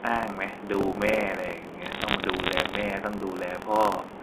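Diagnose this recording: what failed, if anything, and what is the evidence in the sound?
The driver or buffer stage has buffer tearing running through the whole speech clip: a steady robotic buzz at 43.1 Hz that sits on the voice and drops out in the gaps. The writer and the hardware reader have drifted and cross inside every period, so roughly a tenth of each buffer replays audio from about 70 ms earlier, with hard joins on both sides. That repeat rate fits a 1024-sample buffer.

Separately, from 1.82 to 2.82 s there's a burst of sharp ticks and crackle laid over otherwise unchanged speech. That's bit errors on a digital phone line. Each flipped bit corrupts a single sample, and hits on the sign or upper bits give the loudest clicks. The density suggests an error rate of around one percent. The underlying G.711 mu-law coding itself sounds as expected, band-limited to roughly 250 Hz to 3.5 kHz.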